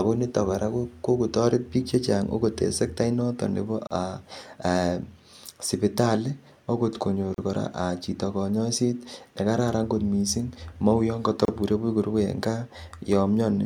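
This speech clip has three short silences, each a gap at a join of encoded pieces: at 3.87 s after "en sektait noton nebo" (about 36 ms), at 7.34 s after "ogot konyor" (about 36 ms), and at 11.45 s after "kot mising mou yon" (about 31 ms). Each segment was encoded separately and joined untrimmed, so encoder start delay and last-frame padding remain. Unlike a dropout, the speech resumes exactly where it stopped, and the edges are codec-smeared rather than clicking.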